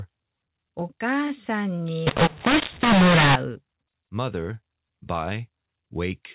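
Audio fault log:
2.07–3.35 s, mu-law and A-law mixed up: between "お母さん" and "うmother", speech carried as A-law telephone audio is decoded with the mu-law curve. Each sample's level is remapped wrongly: some peaks swell, others shrink, and near-silent samples jump well above zero. The result is harsh and gritty, with hiss filling the gaps. On the waveform, the envelope turns jagged and the pauses lose their flat baseline. The spectrogram shows broadband noise smeared up to the 4 kHz ceiling.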